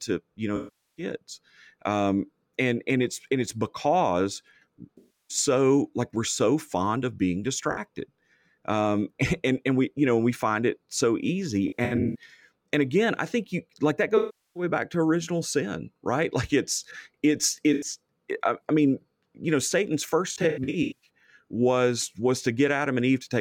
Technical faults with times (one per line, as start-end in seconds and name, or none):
0.56-1.04 AAC frame loss with concealment
4.97-5.37 AAC frame loss with concealment
7.71-7.79 AAC frame loss with concealment
11.68-12.16 AAC frame loss with concealment
14.17-14.63 AAC frame loss with concealment
17.73-17.85 AAC frame loss with concealment
20.27-21.09 AAC frame loss with concealment